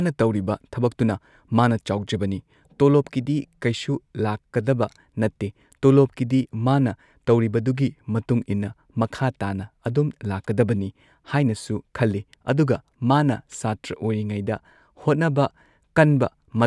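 No technical faults occur at any point in the recording.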